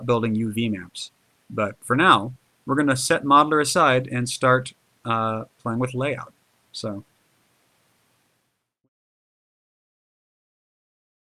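No technical faults can be heard in this audio.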